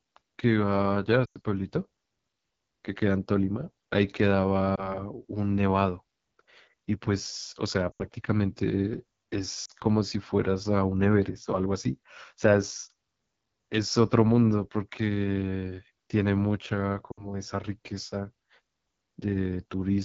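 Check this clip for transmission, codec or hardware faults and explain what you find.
Two faults are present: low-rate wideband voice coding throughout, and five bursts of lost speech frames.

The AMR wideband (HD Voice) codec runs the whole clip. Speech sounds rough and raspy, with a noise-filled top band, which suggests one of its lowest rates, around 8.85 kbit/s.

Lost AMR speech frames occur at 1.25–1.37 s, 4.75–5.03 s, 7.91–8.04 s, 9.65–9.72 s and 17.11–17.32 s. The decoder repeats the last pitch and vocal tract settings at fading gain, producing dips, warbles or quick drops to near silence.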